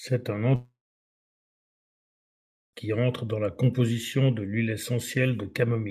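From 0.55 s to 2.75 s the speech decays into a fading buzz, then 2 s of silence, likely a long network dropout that lost 2.18 s.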